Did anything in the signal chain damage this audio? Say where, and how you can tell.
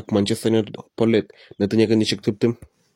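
Yes. At about 0.75 to 0.80 s the speech is interrupted by a short chirp or blip lasting roughly 50 ms, which points to damaged data in a compressed stream at the codec or storage stage. Some of the encoded bytes there were corrupt, so the decoder misread those frames, lost its sync, and produced junk until it found the next valid frame header. A network dropout with concealment would usually give a smooth gap or a smeared repeat instead of this brief squawk of wrongly decoded data.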